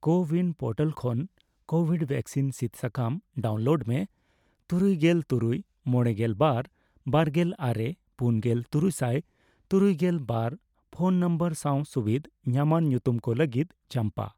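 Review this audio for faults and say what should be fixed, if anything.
Nothing needs fixing, as the signal stays steady and intact throughout with no audible technical faults.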